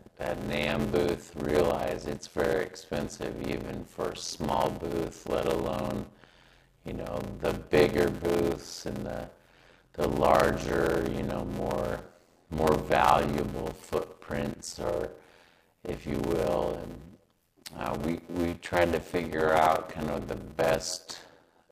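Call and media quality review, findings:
Block size mismatch (padded), throughout: steady 86.1 Hz buzz, audio slowed to 0.625x at about normal pitch. Writer stage likely fills 320 of each 512-sample read block, rest zero-padded. Waveform: regular flat gaps every block. Spectrogram: vertical striping, 86.1 Hz harmonic comb.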